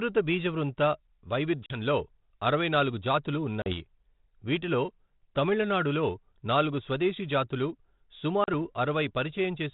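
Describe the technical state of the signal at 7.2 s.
At 7.2 s the speech is intact, carried through G.726 ADPCM at 32 kbit/s with only the light coding noise and 4 kHz band limit that path leaves.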